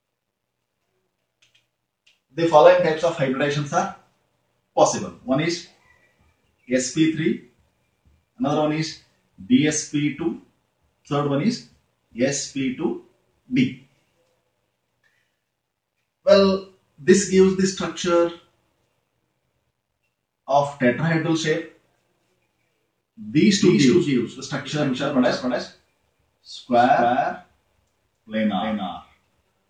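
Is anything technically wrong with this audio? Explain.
Yes. A doubled audio track appears abruptly at 23.47 s and runs to the end. A second copy, likely from a slower capture path, trails by roughly 300 ms at about 5 dB lower, with no decay or room colour.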